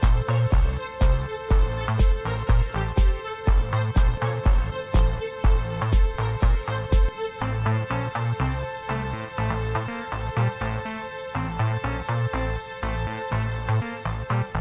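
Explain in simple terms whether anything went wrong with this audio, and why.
Nothing went wrong: the sound travelled over a standard phone-style call connection (G.711), and its lack of anything above 4 kHz is simply how that connection works, not a fault.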